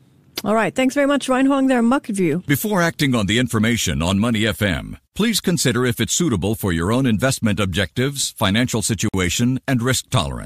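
A Bluetooth stall at 9.09 to 9.14 s, right after "own investment objectives financial", cuts the speech to 52 ms of silence before it carries on. The likely cause is interference delaying packets until the headphones' buffer ran empty, pausing playback until resent packets arrived.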